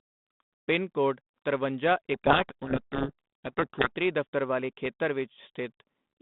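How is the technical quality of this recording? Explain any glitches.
The recording has one clear glitch, a codec payload misread from 2.14 to 3.96 s. For that stretch the receiving side reads the bit order of each G.726 code word reversed from how the sender packed it, so every decoded step is wrong and the speech sinks under harsh, grinding distortion until the packing agrees again. Around it, the telephone-band sound, roughly 150 Hz to 3.7 kHz with only light coding grit, fits a 32 kbit/s G.726 link.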